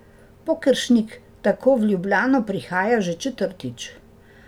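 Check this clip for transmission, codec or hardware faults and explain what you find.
Nothing turns up here: the speech comes across steady and intact, with no trace of a transmission, codec or hardware problem anywhere in the clip.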